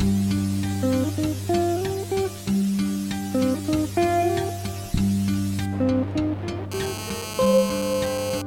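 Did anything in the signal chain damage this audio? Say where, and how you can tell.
Yes. From 6.72 s to 8.42 s a hard, raspy 217 Hz buzz, thick with harmonics and unrelated to the music, sits steadily about 11 dB below it. This is GSM phone buzz in the analogue wiring: a nearby phone in a call transmitted radio bursts that the circuitry rectified into audio.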